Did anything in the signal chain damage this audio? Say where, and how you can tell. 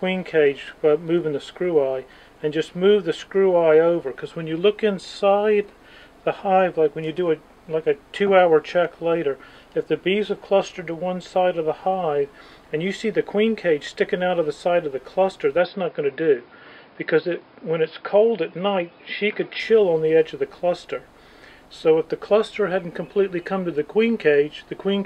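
Yes. From 15.57 s to 19.60 s the sound abruptly turns dull and boxy: everything above 5.2 kHz disappears, and a faint new noise floor, sitting far below the signal, comes in with it. The level barely changes and there is no gap at either boundary. This is the signature of an input switched to a poorer device at the driver or device-selection stage, most likely a fallback to a narrower-band microphone or headset call profile before the original input returned.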